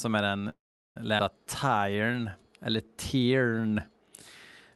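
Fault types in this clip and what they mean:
Call audio freeze: from 0.49 to 0.98 s the sound stalls, trailing off then going silent for roughly 0.38 s, likely packets held up; playback resumes with nothing lost.
Skip ahead: around 1.18 to 1.21 s the audio jumps forward, dropping about a third of a second and splicing the two sides almost seamlessly.
Jitter buffer slow-down: between 1.65 and 3.85 s the buffer stretches the speech by repeating tiny pitch cycles, running at 89% speed and adding 257 ms.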